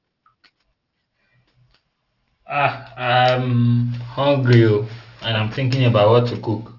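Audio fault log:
throughout aliasing: sibilants turn gritty and metallic, with energy running hard up to 6 kHz. High frequencies fold back as false tones, unlike a clean low-pass, which fits a drop to a 12 kHz rate.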